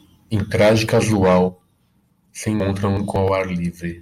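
A garbled, jumbled moment from 2.60 to 3.16 s: chunks out of order, one 186 ms chunk arriving two chunks late, leaving three hard joins.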